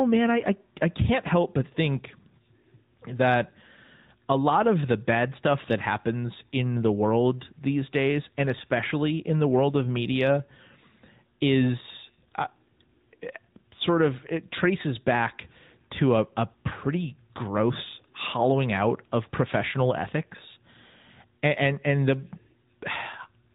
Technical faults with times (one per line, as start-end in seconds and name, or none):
0.00-23.55 AMR narrowband mobile codec